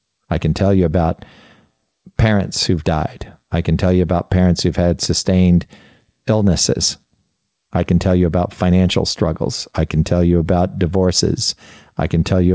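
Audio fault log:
There is no fault in this audio.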